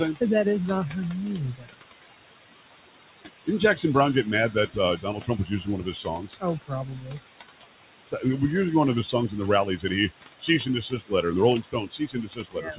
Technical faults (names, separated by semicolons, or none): noise suppressor artifacts; speech cut by the noise suppressor